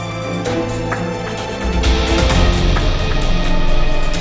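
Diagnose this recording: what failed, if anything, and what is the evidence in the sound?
No technical fault is audible.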